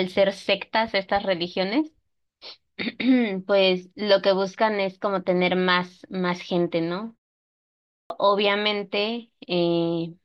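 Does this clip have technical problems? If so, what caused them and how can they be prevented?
Yes. There is one clipped start after a pause: the output device dropped into a low-power state during a pause of about 0.59 s and was still waking when the next sound began. As a result, roughly 0.41 s of audio, from 7.69 s to 8.10 s, never reached the output, so the speech bursts in abruptly out of silence with its opening sounds missing. To prevent this, disable the device's idle power saving or keep a continuous low-level stream running so it never goes to sleep.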